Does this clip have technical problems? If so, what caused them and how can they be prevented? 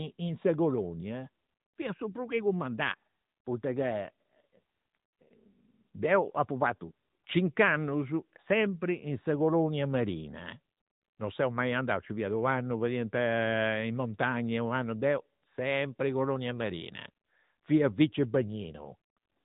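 Yes. The speech has passed through an AMR narrowband mobile codec for its whole length. Nothing above about 3.8 kHz survives, and the codec damage is plainly audible: the voice sounds buzzy and synthetic because each 20 ms frame is rebuilt from a vocal-tract model driven by a few pulses, which fits a mid-range AMR-NB mode around 10 kbps. A plain low-pass filter or a clean telephone band limit would dull the sound without that coded, synthetic texture. To prevent this, record or transfer the speech over a wideband path, such as a direct file or AMR-WB, instead of a narrowband mobile call.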